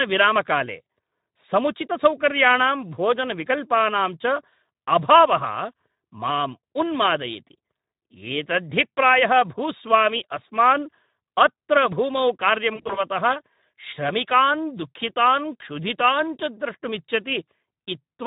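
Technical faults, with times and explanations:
throughout: Speex codec. The speech has a hoarse, grainy edge, and the damage is plainly audible. This CELP coder models each voice with a filter and a coded excitation. Too few bits go to that excitation, so fine detail is swapped for noise. The roughness fits a bitrate around 11 kbps. Any content above 4 kHz is only a shaped hiss, not real detail.
12.75–13.03 s: VoIP packet loss concealed by the speech codec. Right after "भूस्वामी अस्मान् अत्र भूमौ", the sound smears into a stretched, fading fill. About 120 ms of audio went missing in short gaps spread over 200 ms. The longest gap was 40 ms. The decoder repeated its last pitch and filter at falling gain to fill each gap. Each rebuilt frame leans on the one before, so the distortion lingers briefly once audio returns.
17.45 s: VoIP packet loss concealed by the speech codec. A single 20 ms gap gives a brief blur as the decoder extrapolates across it.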